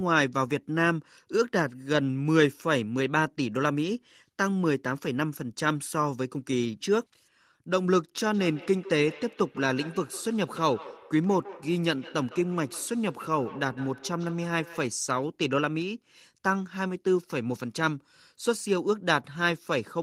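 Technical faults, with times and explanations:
8.34–15.0 s, feedback echo between two devices: the speech returns at a fixed interval of roughly 150 ms, peaking about 18 dB below the speech itself. A second device on the same call in the same room is playing this microphone's signal back into it, and each device's echo canceller removes only its own playback. The steady, regular delay separates it from room reverberation, which smears the sound continuously rather than repeating it at a set spacing.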